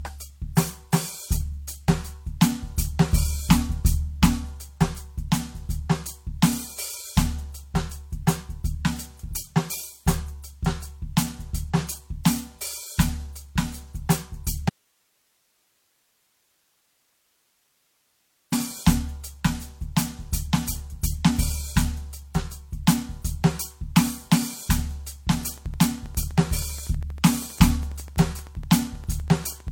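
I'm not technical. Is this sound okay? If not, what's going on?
No. Throughout the music, the top end stops near 17.3 kHz and different kinds of compression damage are heard together. This is likely transcoding between lossy codecs: the file was compressed once, then compressed again in a different format, stacking both sets of damage.

From 14.69 to 18.52 s, nearly four seconds, the music cuts off abruptly and only faint hiss remains before it snaps back. This is an audio dropout to a faint residue, likely the signal being lost while the equipment after the break stayed on.

From 25.33 s to 29.69 s, a steady ticking sits on top of the music, about 12 clicks per second, roughly fifty in all, about as loud as the music. This is a train of clicks, likely interference or a faulty connection or power supply.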